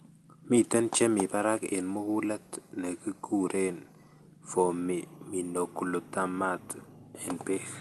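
Nothing in this speech clip stands out as a fault, and the call path it went through sounds just as you'd expect, with the highs tapering off around 12 kHz in the way an Opus call at a modest bitrate tends to leave them.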